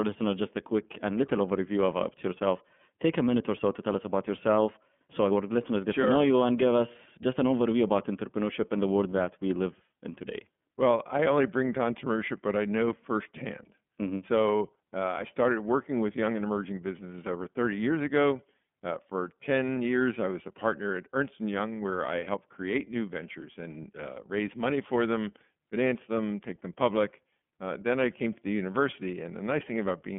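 Throughout, the speech sounds thin, slightly rough and synthetic, with nothing above about 3.6 kHz: iLBC codec coding, independently per 30 ms frame, fitting its 13.33 kbps mode.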